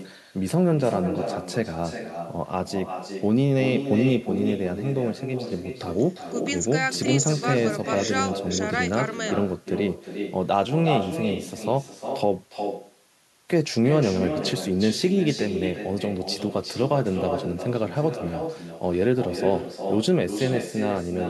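Throughout, echo with no canceller: the far end's loudspeaker leaks into its microphone unremoved, so the speech returns about 8 dB quieter and thinner, roughly 0.4 s late.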